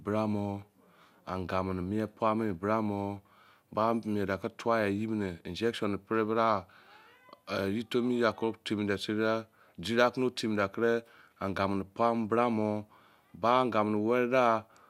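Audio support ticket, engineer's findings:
Speech checked over its full duration with no audible faults; nothing to action.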